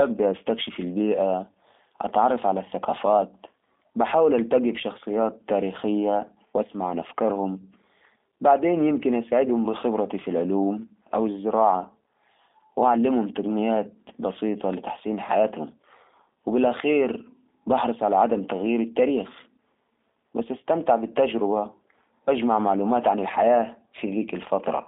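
Speech running through a G.729 codec for its whole length, heard as telephone-band sound between about 250 Hz and 3.6 kHz with nothing above 3.7 kHz. The codec damage is plainly audible: consonants and vowels come out slightly rough and synthetic, because each 10 ms frame is rebuilt from a vocal-tract filter, a pitch predictor and a few pulses, which fits an 8 kbit/s G.729A stream. A clean narrowband filter would sound muffled but smooth, without this buzzy, rebuilt texture.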